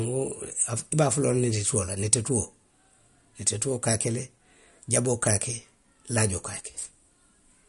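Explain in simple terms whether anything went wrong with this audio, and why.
The speech sounds watery and swirly from start to finish, with a plainly audible smeared, metallic edge on s sounds and nothing above about 11.2 kHz. This is likely MP3 compression, which discards treble and faint detail to save space.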